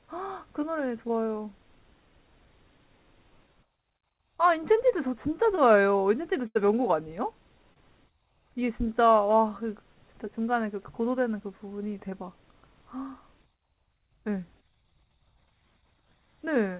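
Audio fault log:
1.08–1.11 s, 5.55–5.59 s, 7.74–7.78 s, 12.10–12.13 s: short concealed packet loss. About 20 ms of audio failed to arrive in time each time, and the receiver patched 12 to 22 ms by extending the preceding sound before rejoining the real signal. Each patch is a brief smear or wobble in the speech.
6.47–6.57 s: burst of packet loss. About 80 ms went missing in one run. The receiver stretched the last sound across roughly 78 ms and faded it as the gap lengthened, giving a held buzz or dying hiss. The speech then jumps ahead past the lost stretch, within call audio that has nothing above 4 kHz.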